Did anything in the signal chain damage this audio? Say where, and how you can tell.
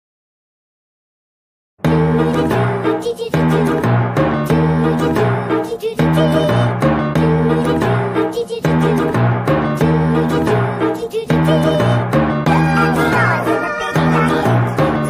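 No, nothing in the signal chain has left an audible mark on this audio. No stage from capture through to playback shows any damage that can be heard.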